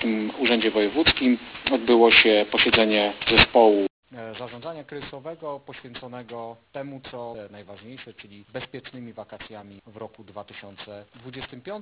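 Aliasing runs through the whole clip: the sample rate was cut without an adequate anti-aliasing filter first, which fits a drop from 44.1 kHz to 8 kHz. Everything above the 4 kHz folding point was mirrored back down into the band as false, unrelated frequencies instead of being removed. Those folded components sit almost as loud as the genuine sound, so bright, hissy content turns gritty and metallic, and the spectrum stays dense right up to the 4 kHz edge.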